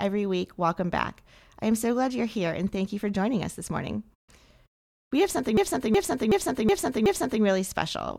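A system hang loop runs from 5.57 to 7.43 s. Playback froze while the hardware kept replaying its ring buffer, so one 0.37 s slice of speech, which fits a 16384-sample buffer, repeats five times at 2.69 Hz as a skipping-record repetition.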